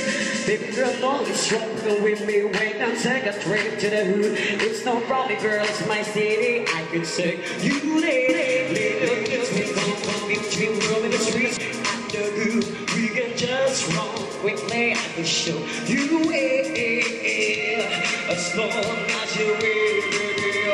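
From 8.29 s to 11.57 s the audio is doubled: a second, full-band copy runs about a third of a second behind the original at roughly 5 dB lower level. It has no decay or room colour, so it reads as a distinct repeat rather than a reflection, and it switches in and out abruptly at both boundaries. The likely cause is the same signal reaching the mix twice, once through a slower path or through two misaligned copies in an edit.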